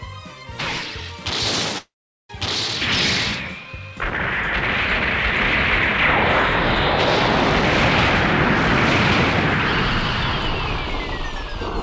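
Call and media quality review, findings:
Long network dropout, 1.78–2.31 s: roughly 0.5 s of audio missing. Last sound continued as a fading buzz or hiss, then about 0.41 s of silence before audio resumes with the gap content lost. Likely cause: packet loss outlasting the jitter buffer's concealment. Audio band-limited to 8 kHz, as expected for G.722.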